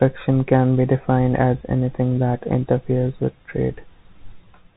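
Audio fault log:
throughout, Bluetooth CVSD headset codec: the speech sounds boxed in, with nothing above 4 kHz, scratchy s sounds, distorted loud bright moments and a granular hiss underneath. A one-bit up-or-down coder whose adaptive step can't keep pace causes this, consistent with a 64 kbps CVSD link.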